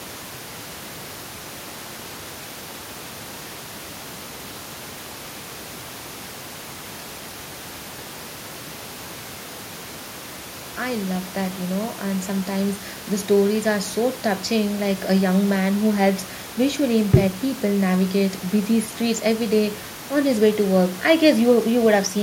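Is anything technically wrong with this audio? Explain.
No, nothing technically wrong can be heard here.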